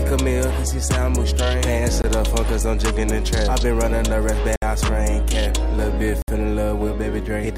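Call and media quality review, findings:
Block of digital silence at 2.02–2.04, 4.56–4.62 and 6.22–6.28 s (20, 60, 60 ms): flat near-silent waveform gaps and vertical spectrogram stripes. Probable output buffer underrun.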